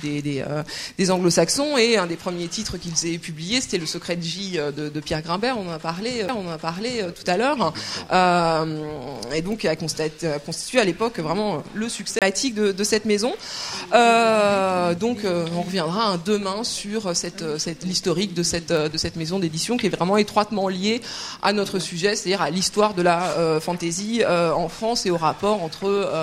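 At 6.28 s there is a tick and the audio lurches to a different point, and at 12.19 to 12.22 s the same thing happens again with a much longer gap, around 30 ms of silence, before playback resumes. Both are CD skips. The laser jumped off its track onto another turn of the disc's spiral, so the player muted briefly and then carried on from the wrong place.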